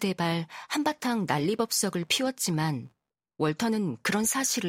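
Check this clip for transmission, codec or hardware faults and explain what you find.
One hardware fault is present. Computer activity noise runs from 1.10 to 3.10 s. When the processor, graphics card or mouse draws varying current, that load shifts the ground shared with the audio circuit, and the disturbance rides into the recording. Here it is a faint buzzy chirping pulsing at around 70 Hz, roughly 45 dB below the speech. It follows the computer's activity rather than the speech, appearing and vanishing independently of it.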